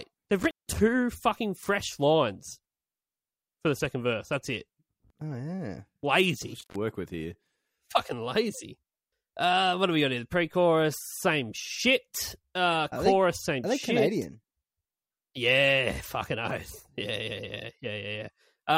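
Intermittent contact at 0.39 to 0.79 s, just before "fucking fresh lines", and at 6.60 to 6.76 s, between "yeah lazy" and "with here". In this speech clip a loose connection opens for about 160 ms and 113 ms, dropping the signal with crackle at each edge.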